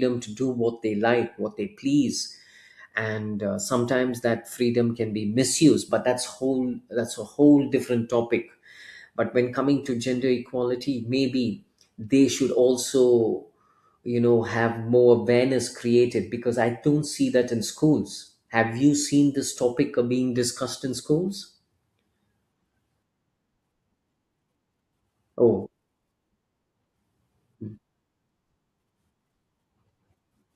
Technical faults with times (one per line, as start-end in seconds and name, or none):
none